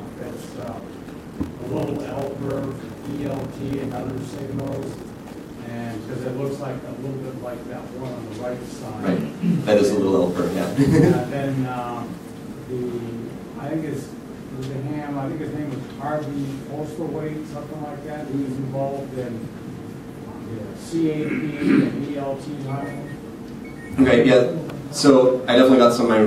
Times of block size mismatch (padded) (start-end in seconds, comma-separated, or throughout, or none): 0.00-5.57